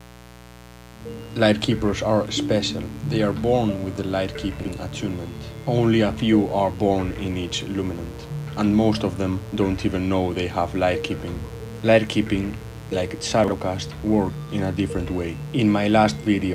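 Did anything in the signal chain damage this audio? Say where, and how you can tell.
Yes. Mains buzz runs through the whole clip, entering at the analogue wiring stage. It is a steady, raspy buzz built on 60 Hz and sitting roughly 20 dB below the wanted sound. The rasp comes from sharp current spikes drawn twice per mains cycle by something like a dimmer or rectifier, or picked up through a missing shield. Those spikes spread energy across many harmonics of 60 Hz, well up into the kilohertz range.

Chunks out of order appear at 4.6 to 4.68 s and again at 13.44 to 13.52 s. This is a buffering fault, at the driver, buffer or network stage. Each time, a 40 ms block plays one slot late, after the block that should follow it. No audio goes missing, but the sequence is swapped. There are three hard joins around each swap, and the brief reordering gives the audio a jumbled moment.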